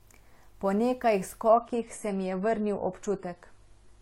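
From about 1.48 s to the end, the speech drops abruptly to a duller, thinner quality with no gap: an adaptive stream at a lower bitrate. Nothing survives above roughly 11.5 kHz, and the stronger codec artefacts suggest a step from around 96 to 32 kbit/s AAC.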